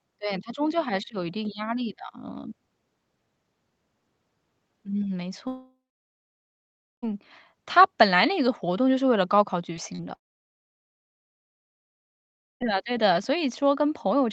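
From 5.47 to 7.04 s the sound trails off in a fading buzz, then about 1.3 s of silence: a long network dropout, likely audio lost in transit and never recovered. From 9.76 to 9.79 s, and again from 9.95 to 10.05 s, brief smears and wobbles mark short concealed packet loss, where the receiver patched missing fragments by extending the preceding sound. From 10.15 to 12.62 s a second long network dropout leaves roughly 2.4 s of near-total silence, likely another stretch of lost audio, before the sound resumes.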